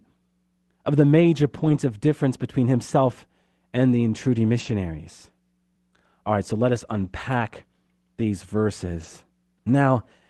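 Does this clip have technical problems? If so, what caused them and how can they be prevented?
Yes. Four short stretches were lost packets rebuilt from error correction, at 1.57–1.75 s, 4.59–4.73 s, 6.97–7.07 s and 8.99–9.05 s. In each, the decoder substituted low-bitrate copies for missing packets, so the sound turns briefly rough and noisy without a gap. On a spectrogram these stretches show as smeared, grainier patches. Reducing network packet loss, or adding a larger jitter buffer to allow retransmission, would prevent it.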